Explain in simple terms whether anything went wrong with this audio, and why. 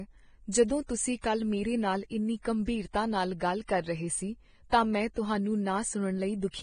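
Something did go wrong, and it lasts for the whole clip. The speech sounds hissy and grainy, with a rough, papery texture where the crisp upper detail should be, and sharp consonants come across smeared. Nothing is heard above about 9.7 kHz, so the top end sounds dull. This points to heavy lossy encoding, likely Vorbis compression at a low quality setting. The encoder cuts the treble and stores what remains so coarsely that fine detail turns into noise.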